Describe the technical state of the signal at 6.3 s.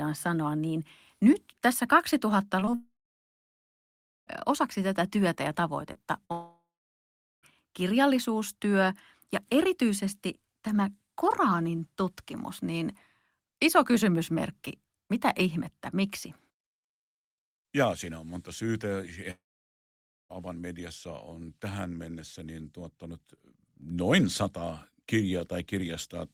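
At 6.3 s the speech breaks up. A burst of packet loss runs from 6.25 to 6.32 s. Packets stopped arriving in time. The receiver stretched the last sound it had across the hole for about 49 ms, lowering it as it went. About 40 ms of speech never plays. The sound becomes a brief, fading smear in place of clean speech.

A long network dropout follows directly, from 6.32 to 7.45 s. Its cause is likely an extended break in delivery. The concealment carries the last sound forward as a decaying buzz or hiss, then gives up. About 800 ms of near-silence follows. Roughly 1.1 s of speech is lost outright. When audio resumes on "kirjallisuustyö ja erityisesti tämä", it jumps ahead, and the missing stretch is not recovered.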